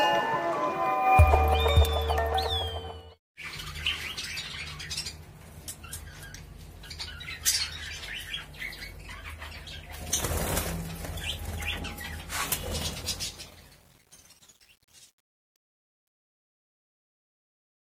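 Truncation distortion on a fade runs from 12.61 s to the end at 17.91 s, worst from 12.99 s on. The fade-out stage keeps too few bits and adds no dither, which fits 9-bit resolution, so the dying tail breaks into gritty steps.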